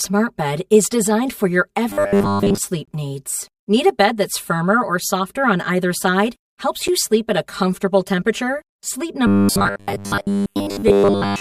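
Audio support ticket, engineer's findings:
Channel delay (comb filtering), whole clip. Hollow, phasey speech. One channel about 5 ms late, summed to mono. Notches spaced from around 100 Hz upward.

Robotic sound from repeated short buffers, 1.90–2.60 s after "is designed for your", and 9.27 s to end. Metallic 100 Hz buzz. Likely buffer underrun repeating 10 ms chunks, most real audio skipped.

Gap between stream segments, 2.85–2.88 s (22.9 ms) and 6.88 s (8.1 ms) before "you sleep at a". Hard-edged silent holes. Timestamp mismatch at boundaries of what sound like 2 s segments. No audio lost.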